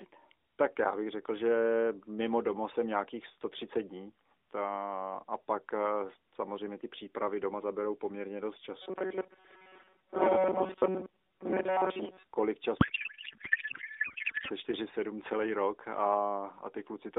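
A speech clip carried over an AMR narrowband mobile codec, band-limited to about 300 Hz to 3.7 kHz, with light coding damage that fits the 12.2 kbps mode. From 8.82 to 12.27 s the voice turns into a rigid, metallic buzz at 188 Hz. This is robotic sound from repeated short buffers, likely from audio arriving too slowly. The player fills the gaps by looping the last fragment. A 188 Hz buzz points to a loop of about 5.3 ms. Most of the audio in this stretch is repeats, so much of the real signal is skipped. The voice only loosely follows its original shape. From 12.78 to 14.50 s a codec payload misread takes over. The speech dissolves into garbled noise and warble that barely tracks it. The sender packs AMR in octet-aligned form, but the receiver reads it as bandwidth-efficient. So every field lands in the wrong place. The decoder still produces sound, but it is nonsense until both sides agree on the packing.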